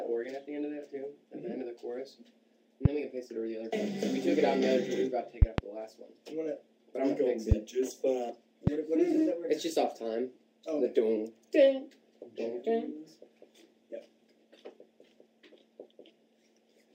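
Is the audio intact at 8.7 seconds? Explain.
No, there's a single loud pop from 8.67 to 8.70 s, standing roughly 15 dB above the surrounding sound, which carries on underneath it. It's likely a sudden voltage step, say from a plug, switch, static or driver glitch, added to the signal.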